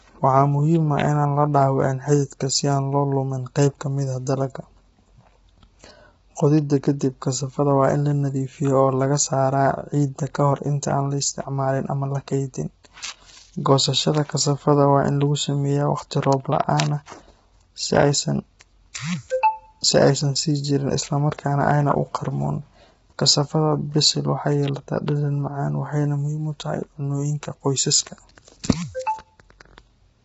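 From start to finish, the speech sounds rough and grainy. Noise fills the gaps between the harmonics, and nothing is heard above 7.8 kHz. The likely cause is heavy low-delay AAC compression, the AAC-ELD codec common on video calls. Its very short frames cannot separate closely spaced pitch harmonics well, and per-frame overhead takes a larger share of the bits. The damage level fits a bitrate around 16 kbps, too little to hold the voice cleanly.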